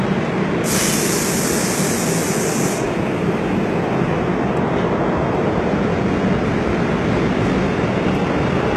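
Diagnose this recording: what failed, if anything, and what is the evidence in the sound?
The damage is at the codec stage, likely HE-AAC compression at a low bitrate, something near 16 kbps. Throughout, the top is bright but fake, with treble copied up from lower bands by replication and nothing above 12.3 kHz, so high detail sounds gritty and metallic.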